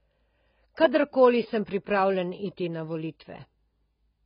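AAC compression runs throughout the speech. Nothing is heard above 5 kHz, and the sound is dull and heavily smeared. The likely cause is AAC-LC coding at a very low bitrate, around 16 kbps, where the encoder drops its cut-off and starves bands of detail.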